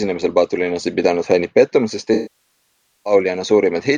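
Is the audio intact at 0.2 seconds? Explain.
Yes, the speech at 0.2 seconds is intact, with no fault audible at that moment.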